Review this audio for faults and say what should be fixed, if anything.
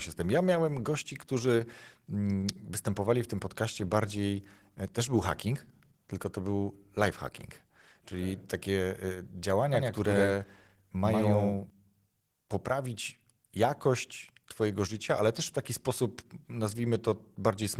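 The whole clip has plainly audible Opus voice compression: at 16 kbps in hybrid mode, the coarse excitation coding leaves the speech hoarse and a bit robotic. Give it a higher bitrate, say 32 kbps or more, and that roughness should clear up.

From 9.74 to 11.70 s there's a doubled audio track. A second copy at about the same level runs roughly 100 ms behind, likely from a slower capture path or a misaligned edit. Mute the duplicate path or tidy that edit so only one copy reaches the mix.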